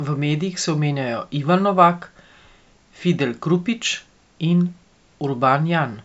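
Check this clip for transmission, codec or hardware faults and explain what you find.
No transmission, codec or hardware faults are audible here.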